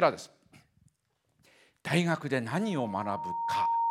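A speech clip with loudspeaker feedback squeal from 2.53 s to the end. A single tone near 925 Hz swells over about a second until it is roughly as loud as the speech. The microphone is picking up its own loudspeaker, and the loop gain exceeds one at that frequency.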